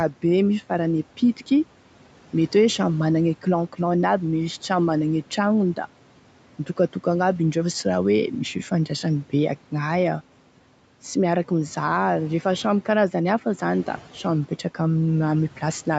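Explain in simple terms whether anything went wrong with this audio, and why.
One thing did go wrong, briefly: speech cut by the noise suppressor, between about 6.66 and 7.06 s. The call's cleanup stage, which is meant to turn down background hiss, mistook a small bit of the talking for noise and dipped it along with the room sound. Only around a tenth of a second in total gets caught, so you hear a sound that seems swallowed or faint rather than missing outright.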